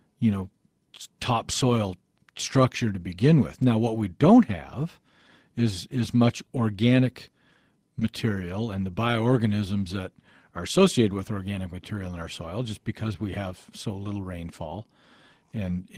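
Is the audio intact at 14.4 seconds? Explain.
Yes, the speech at 14.4 seconds plays through intact, with no dropout, click or distortion at that moment.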